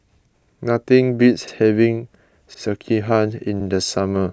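Overlapping chunks at 0.41, 1.47, 2.54 and 3.60 s: the speech was handled in roughly one-second pieces, each starting 64 ms before the previous one ended, so that slice plays twice at every join, heard as a brief regular stutter.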